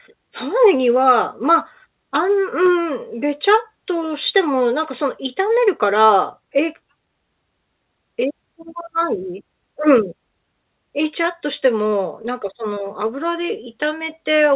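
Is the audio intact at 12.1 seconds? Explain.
No. Scattered short gaps run from 11.9 to 12.78 s, about 80 ms missing in total. Roughly four tiny dropouts, none much over 20 ms, were patched by extending the preceding sound. They come through as brief ticks and smears.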